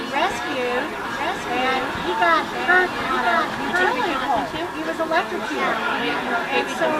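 From 1.05 s to 4.27 s there's a doubled audio track. A second full-band copy of the sound runs about a second behind the original and roughly 5 dB quieter. It has no tail or room colour and just cuts in and out abruptly at those two points. The likely cause is the same audio being captured again through a slower path, or an edit leaving two copies out of step.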